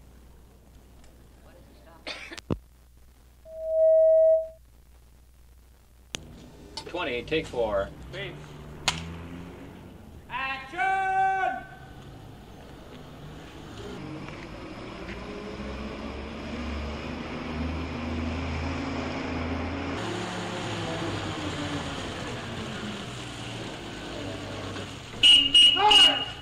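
At 3.45 s a loudspeaker feedback squeal kicks in. A mic is hearing the speaker it feeds, and at 644 Hz the loop gain has crept past one, so that single tone feeds on itself. It swells over roughly 0.4 s into a steady squeal sitting about 10 dB above the rest of the audio, then stops at 4.58 s, which is where the loop was broken or the gain brought back down.

From 13.98 s to 19.97 s everything runs slow and low, with speed and pitch dropping together. It plays at 0.755 times the proper rate, which pulls the pitch down by about five semitones and stretches timing out to match. Then it snaps back to normal. That is likely a section at the wrong speed, where an editor or player has fitted that stretch of audio to the wrong clock.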